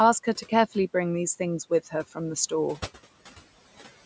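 From start to finish, the room noise behind the speech pumps: it drops away in the gaps between words and swells back up underneath them. These are noise suppressor artifacts. The suppressor works frame by frame, pulling down each frequency band it judges to be steady noise by about 15 dB, then easing off wherever speech fills those bands. The room noise sits about 19 dB below the speech, with nothing audible above 8 kHz from the call microphone processing.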